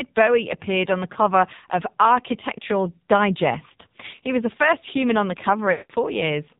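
From the start, the speech is muffled, buzzy and synthetic, with nothing above 4 kHz. This is the AMR narrowband mobile codec under heavy strain. Its vocal-tract model, fed too few bits, rebuilds the voice crudely, which fits a low rate of about 5.9 kbps.

From 5.72 to 5.92 s, the voice smears into a drawn-out, warbling tone that fades toward silence. These are lost AMR speech frames. The decoder repeated the last good pitch and vocal-tract settings at falling gain for about 180 ms, which fits nine lost frames.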